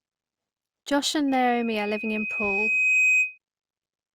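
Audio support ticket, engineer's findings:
Mic-to-loudspeaker loop gain above unity at 2.5 kHz: loudspeaker feedback squeal, 1.28–3.38 s, tone swelling over about a second and a half to a few dB above the speech.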